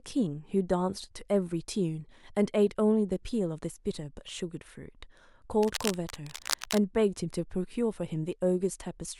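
A speech clip with cable scratch noise from 5.63 to 6.78 s: a burst of rough, uneven scratching laid over the speech, roughly 10 dB below it. The likely cause is a worn cable or connector being moved. A spectrogram shows dense, irregular broadband streaks there, and the waveform shows jagged spikes.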